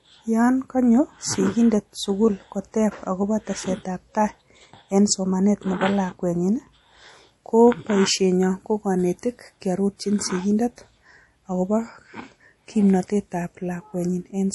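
Speech that sounds watery and swirly from start to finish, with smeared consonant attacks and metallic chirps on s sounds, and nothing above 11.5 kHz. This is likely MP3 compression, plainly audible here and consistent with a bitrate near 48 kbps.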